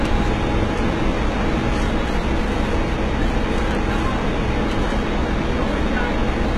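Throughout the clip, the audio carries heavy codec damage consistent with HE-AAC compression, likely at a very low bitrate of around 16 kbps. Nothing is present above about 11.8 kHz. Below that, the upper range sounds synthetic, a sign that the treble was rebuilt from copied lower bands under a coarse envelope rather than coded directly. Its harmonics fail to align with the core band, so high detail comes across as gritty and metallic.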